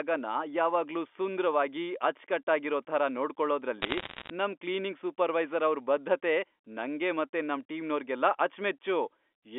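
From 3.82 to 4.30 s, bit errors on a digital phone line add a burst of crackle over the speech. Roughly one bit in a hundred flips. Each flip corrupts single G.711 samples, so sharp ticks sit over the unchanged, 250 Hz to 3.5 kHz telephone sound.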